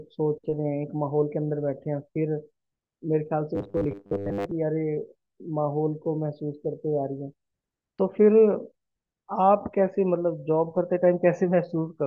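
Speech, with robotic sound from repeated short buffers between 3.55 and 4.52 s. Across that stretch the speech collapses into a rigid, metallic buzz fixed at 100 Hz that still roughly tracks the syllables. The likely cause is audio arriving too seldom, so the playback side loops the most recent fragment to fill the gaps. A 100 Hz buzz fits a repeated chunk about 10 ms long, and most of that second is repeats rather than genuine signal.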